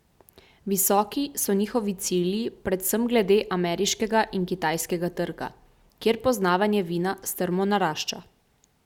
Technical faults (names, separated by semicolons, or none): none